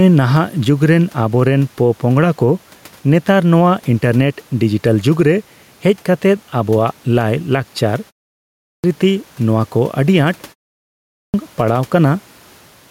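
All the way through, you can hear gain pumping. The gain swings by roughly 5 dB, so everything sounds squashed and evened out. That's likely a fast limiter fighting a mic gain that's set far too high.

At 8.46 s and again at 10.94 s, there's a clipped start after a pause. After gaps of about half a second, the speech jumps in abruptly with roughly 0.38 s and 0.40 s of its opening missing, as if the output device dozed off and needed time to wake up again.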